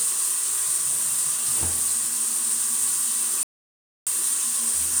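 From 3.43 to 4.07 s, an audio dropout to silence: about 0.64 s of silence with no room tone, likely from a lost input while recording continued.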